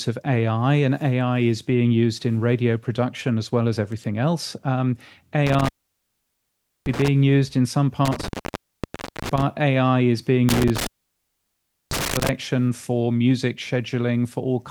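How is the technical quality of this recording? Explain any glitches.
The technical quality suffers from three dropouts caused by an intermittent contact. A loose cable or plug briefly breaks the signal path, so the speech cuts out with crackle at each break and make. The line stays open for about 1.18 s within 5.47 to 7.08 s, just before "used in some". It is open for about 0.94 s within 8.05 to 9.42 s, after "used in some". A third open of about 1.05 s falls within 10.49 to 12.29 s, between "is being" and "for music".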